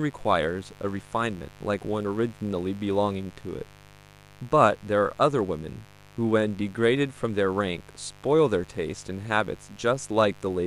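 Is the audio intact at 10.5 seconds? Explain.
No. Mains buzz is present at 10.5 s, as it is from the start of the clip to the end. Sharp switching spikes from a dimmer, rectifier or poorly shielded line get into the signal path twice in each 50 Hz cycle. They stack up harmonics of 50 Hz that climb well into the kilohertz range. At 10.5 s this is heard as a steady, raspy buzz under the speech, roughly 25 dB below it.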